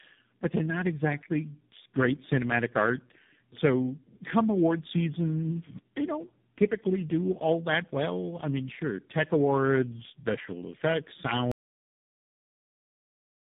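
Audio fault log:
throughout: tandem speech coding. The speech is rougher, more muffled and warblier than one codec alone would leave it, with nothing above 3.8 kHz, which fits three low-rate coders in a row.
11.52 s to end: audio dropout to silence. After "tech awards special effects" the sound stops dead into silence with no room tone, unlike a fade or gate, likely a lost input.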